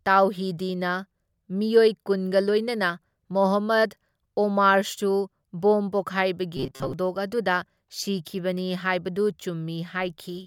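From 6.57 to 6.94 s the speech turns into a rigid, metallic buzz pinned at about 133 Hz, still loosely tracking the syllables, just before "ꯑꯗꯨꯗ ꯁꯤꯈꯤꯕꯅꯤ ꯍꯥꯢꯕꯗꯨ". This is robotic sound from repeated short buffers. The likely cause is that fresh audio stopped arriving in time, so a short slice of roughly 7.5 ms was replayed over and over to fill most of that stretch. The fixed repeat rate imposes that steady buzz pitch.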